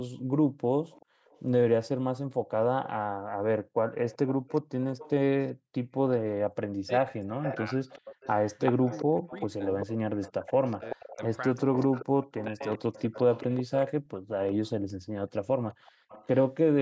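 A faint delayed copy of the speech trails it from 0.9 to 1.4 s, about 30 dB down, and returns louder from 4.08 to 5.94 s, about 20 dB down. This is echo leak, most likely from a far end playing the call on a loudspeaker whose echo canceller let part of it back through. The copy lags by 384 ms. On a spectrogram it appears as a weaker duplicate of the harmonic pattern shifted right by that amount. In the waveform it shows as low-level ripple filling the gaps.

From 6.76 to 7.8 s the speech dips sharply, by roughly 40 dB at its deepest and for about 0.7 s in total. This is speech suppressed in double talk, likely an echo canceller unable to separate the talker from the echo and turning both down. The waveform shows the envelope pinched toward silence.

Echo leak is strongest from 7.43 to 13.86 s, only about 10 dB below the speech, a doubling 384 ms behind it. Suppression recurs inside this stretch from 8.72 to 11.91 s, roughly 40 dB deep across about 1.5 s in broken pieces, and from 12.47 to 12.95 s, about 30 dB deep for around 0.3 s. 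These show as chopped gaps in the waveform. Short echo tails return at 14.48 to 14.7 s and 15.69 to 16.45 s, each about 25 dB down. Above all of this the spectrogram stays empty past 8 kHz, the band limit of the call's microphone path.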